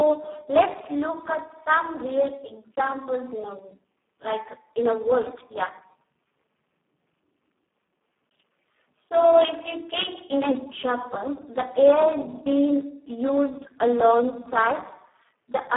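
Throughout, the Speex codec runs at a low-quality setting, consistent with roughly 4 kbps, leaving speech heavily damaged, noisy and hoarse, confined to 250 Hz–3.4 kHz, with nothing above 3.7 kHz.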